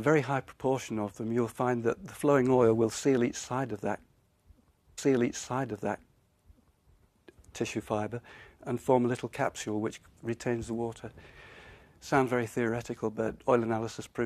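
At 4.97 s there's a stream segment repeated. The player fetched or queued the same chunk of the stream twice, so from 4.97 to 6.97 s you hear a two-second stretch that you've just heard. There's a small blip at the jump back, where the playback skips backward to replay that stretch, and the clip runs about two seconds longer than it should. Everything after it arrives that much late.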